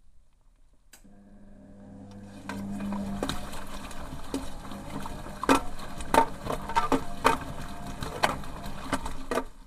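No technical faults can be heard anywhere in the audio; the signal holds steady and intact throughout.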